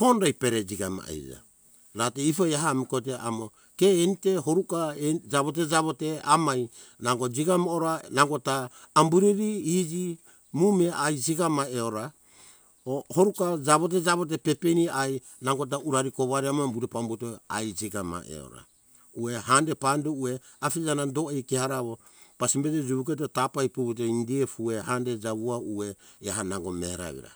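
No technical faults can be heard anywhere in the recording. There is nothing to mark at any point along its timeline.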